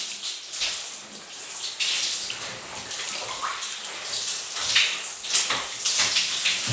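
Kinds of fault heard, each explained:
No kinds of fault are heard in these sounds.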